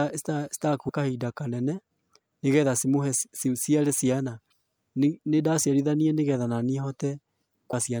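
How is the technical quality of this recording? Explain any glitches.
Three short glitches break into the speech, at 0.88 s, from 4.48 to 4.52 s just after "nĩgetha cimũhe ciciare ciana", and from 7.70 to 7.74 s. Each is brief, lasting about 20 to 40 milliseconds. These come from damaged data in a compressed stream. Corrupted bytes make the decoder misread a frame, lose its place, and hunt for the next valid frame header, producing a chirp, squawk, click or short gap before playback resumes.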